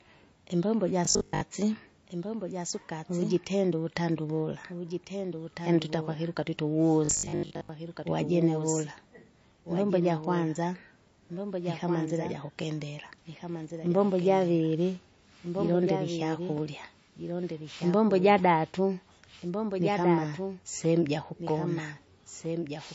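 A doubled audio track runs from the start of the speech: a second full-band copy trails about one and a half seconds behind, roughly 10 dB quieter. It has no decay or room colour, which points to the likely cause, the same signal captured twice through paths with different latency or two out-of-step copies layered in an edit. The result is a quieter, dry second voice trailing each phrase.

MP3 compression damage is also plainly audible throughout. The dullness and watery, swirling texture fit a low bitrate near 34 kbps. The likely cause is an encoder short of bits cutting the treble at a fixed point and dropping weak frequency lines, which flicker on and off between frames. Sibilants take on a metallic chirp and consonant attacks smear.

Robotic sound from repeated short buffers appears from 1.05 to 1.41 s and again from 7.05 to 7.69 s. In both spans the speech collapses into a rigid, metallic buzz at 50 Hz, which fits a 20 ms buffer being replayed over and over. 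The likely cause is new audio arriving too rarely, so the software loops the last buffer and skips most of the real signal. The buzz still loosely follows the speech.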